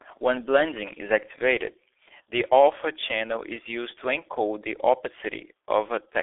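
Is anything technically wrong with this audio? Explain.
Yes. The whole clip carries G.723.1 codec damage. Nothing gets through above 3.7 kHz, and the slow, coarse modelling of the speech in long frames, which fits a rate around 6.3 kbit/s, leaves it muffled and hoarse with smeared consonants.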